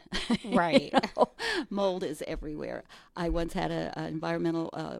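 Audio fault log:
1.64 s to end, periodic clock jitter: after "you know", clock wobble near 2 kHz adds metallic sidebands, visible on a spectrogram as copies flanking each harmonic, strongest higher up.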